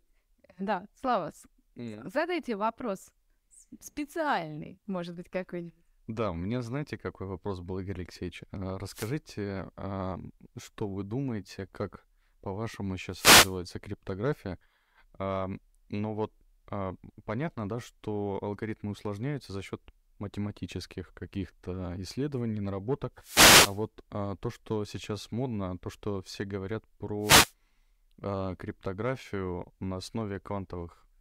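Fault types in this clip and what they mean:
Wireless microphone noise hit: the analogue FM radio link from the microphone briefly loses signal strength as reflected paths cancel the direct one, so the receiver's own noise rises above the fading carrier. In this speech clip that happens four times, at 8.89 to 9.15 s, 13.11 to 13.58 s, 23.18 to 23.84 s and 27.20 to 27.53 s, each heard as a short swish of static, a quarter to two-thirds of a second long, laid over the voice.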